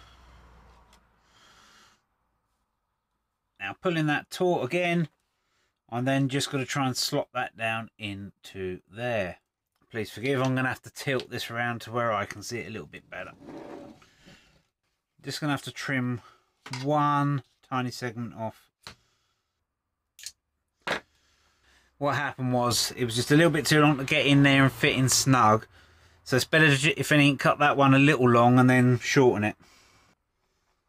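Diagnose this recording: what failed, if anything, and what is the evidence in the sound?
A sudden gain jump occurs at 22.71 s. The sound and the background noise rise together by about 6 dB and stay there to the end. Nothing fades in. The likely cause is a digital gain change applied without a ramp, in the driver or processing stage.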